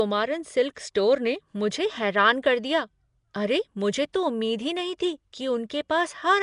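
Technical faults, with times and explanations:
Throughout, Nellymoser compression: the speech carries a rough, hissy halo and a smeared, underwater quality, and nothing is heard above 10.6 kHz. The likely cause is the Nellymoser Asao codec from Flash, at a rate that fits roughly 44 kbps. It codes the audio in short blocks at a fixed, small bit budget, so weaker bands get no bits and are filled with synthetic noise. That noise fill produces the hiss, and the coarse blocks blur the detail.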